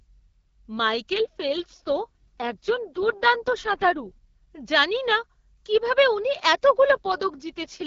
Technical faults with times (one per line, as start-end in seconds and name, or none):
1.11-4.18 AMR rate drop
6.90-7.86 AMR rate drop